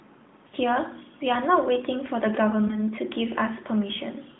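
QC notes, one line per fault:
0.48–0.54 s, lost AMR speech frames: about 40 ms of data failed the checksum, consistent with two consecutive 20 ms frames. The decoder kept repeating the last good pitch and vocal tract settings at falling gain, so the sound briefly smears and sags, then returns weak or rough for a moment.
2.68–2.79 s, lost AMR speech frames: roughly 20 ms is gone, fitting a single frame. Its concealment gives a short warble or dip within the 200 Hz–3.6 kHz narrowband line.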